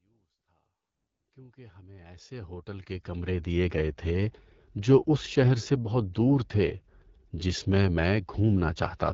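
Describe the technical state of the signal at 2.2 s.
At 2.2 s the speech carries AMR wideband (HD Voice) codec damage, and it runs through the whole clip. The codec models the voice as pulses driving a vocal tract filter up to 6.4 kHz and fills the band above with shaped noise. Nothing is heard above 7.5 kHz. The rough, raspy grain is plainly audible and fits one of the two lowest rates, near 8.85 kbit/s. The level here is still rising in a smooth fade-in that ends at 3.59 s.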